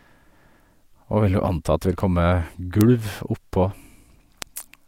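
Speech with three bit error spikes, sharp isolated ticks at 2.00, 2.81 and 4.42 s, each a flipped bit briefly jumping the sample value by a power of two. On the waveform each is a one-sample needle (three samples at 4.42 s); on a spectrogram, a thin full-band vertical line.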